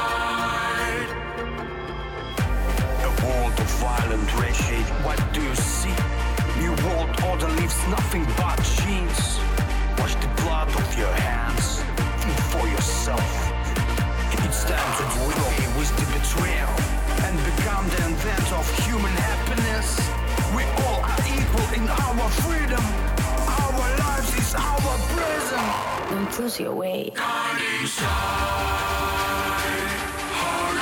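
Frames out of order appear at 4.49 to 4.88 s, 13.45 to 13.86 s and 15.12 to 15.52 s: each stretch swaps two adjacent blocks of about 186 ms, so a garbled flutter, seen as abrupt vertical discontinuities in the spectrogram and waveform.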